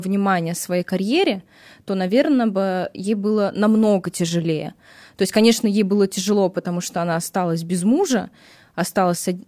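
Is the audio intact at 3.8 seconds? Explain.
Yes, at 3.8 seconds the speech plays through intact, with no dropout, click, distortion or other fault to be heard at that moment.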